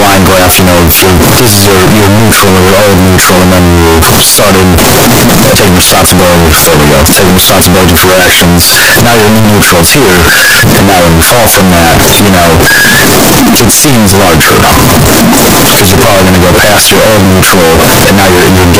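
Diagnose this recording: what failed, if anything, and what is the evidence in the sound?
Sample-format conversion failed for the whole clip: the speech is harsh, near-square and very loud, with background noise as loud as the talking. This is float read as integer, likely 32-bit float samples read as 32-bit integers. Unlike ordinary clipping, the level stays almost fixed and high regardless of source loudness, and pitch survives.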